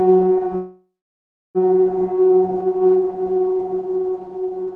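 At 0.55 s the sound stalls into a fading buzz, then about 0.65 s of silence, resuming at 1.58 s with nothing lost: a call audio freeze, likely from delayed packets draining the jitter buffer.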